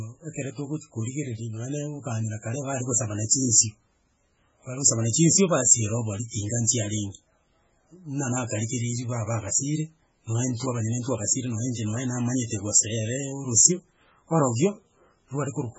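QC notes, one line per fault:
Throughout: MP3 compression, likely at a very low bitrate in the region of 16 kbps. The speech carries nothing above 7.7 kHz, so sibilants and breath lose their top and the sound is dull. The damage is heavy: weak frequency lines drop in and out between frames, giving a watery, swirling texture with metallic chirps on s sounds, and consonant onsets smear because the encoder has too few bits to hold them.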